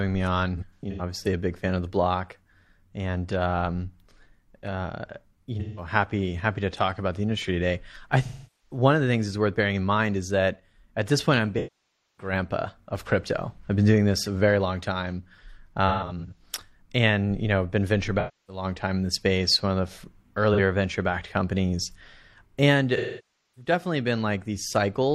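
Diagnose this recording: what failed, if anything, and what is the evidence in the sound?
The codec stage is at fault: AAC frame loss with concealment in this speech at 0.57, 5.60, 8.24, 11.57, 15.88, 18.19, 20.54 and 22.96 s. The decoder patches gaps from the last good spectrum, so short ones go smeared and phasey. The two 0.6-second losses, near 11.6 and 23.0 s, decay toward silence before fading back.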